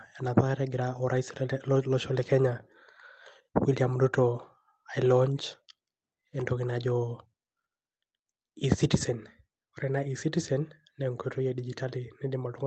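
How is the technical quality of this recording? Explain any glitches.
No glitches can be heard anywhere in this speech recording.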